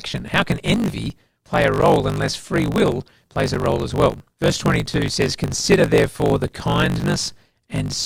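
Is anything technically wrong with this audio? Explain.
Yes, there are two faults.

Block size mismatch (truncated), throughout the clip: one stage writes longer blocks than the next stage reads, and the tail of each block is discarded. The 50 Hz buzz marks the block rate. The speech runs about 1.16 times fast while keeping roughly its normal pitch, which points to 1024-sample blocks being cut to around 880 samples on read. The missing fragments are what produce the steady buzz under the speech.

Gap between stream segments, at 1.81, 3.55, 5.28 and 7.01 s: the time stamps of adjacent segments don't quite meet, and the player fills each gap with silence. The result is a hard-edged dropout of about 14, 7, 9 and 6 ms respectively, recurring every 1.73 s or so. The first falls between "can envy play a" and "unless free will plays", and the second between "unless free will plays" and "role as well". 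No audio is lost at these points.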